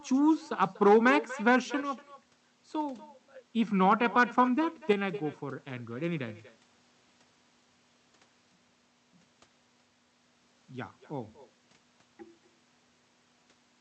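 Throughout the clip, the speech carries an echo with no canceller. Each phrase returns roughly a fifth of a second later, about 16 dB below the direct sound. The far end seems to have played the call through a loudspeaker, and its microphone sent it back. Nothing removed that copy. It sounds thinner than the original, like a faint shadow trailing every syllable.

At 1.81 s the level suddenly falls by about 6 dB. It recovers at 3.24 s. At 4.93 s it drops again by the same amount and stays down until the clip ends. The step is abrupt, not a fade. The likely cause is one stereo channel dropping out. When the two channels are summed to mono, the shared sound loses half its level. Anything present only in the lost channel simply vanishes.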